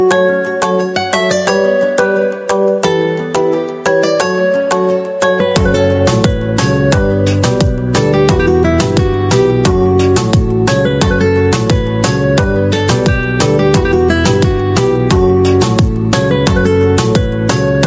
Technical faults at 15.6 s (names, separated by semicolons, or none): gain pumping